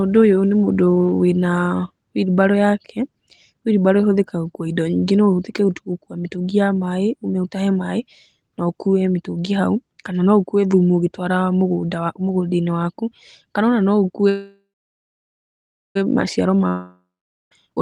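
At 14.29 s the speech stops and a fading buzz carries the last sound on, giving way to about 1.3 s of silence before the audio resumes at 15.97 s. This is a call audio freeze, likely from packets held up in transit until the jitter buffer ran dry. Unlike a dropout, nothing is skipped. The speech picks up exactly where it stopped, so the 1.66 s gap simply adds delay.

A second break runs from 16.68 to 17.53 s: a brief fading fill, then about 0.46 s of silence. This is a long network dropout, likely where audio never arrived. What sets it apart from the freeze is that the speech returns further on, with roughly 0.96 s of material gone for good.

In the final moments, from 17.66 s to the end at 17.82 s, the speech sounds hurried, running at about 186% speed while its pitch stays the same. This is a jitter buffer speed-up, trimming roughly 150 ms of backlog by cutting out many short pitch-period slices. 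It differs from a dropout because the audio is squeezed gradually rather than jumping ahead.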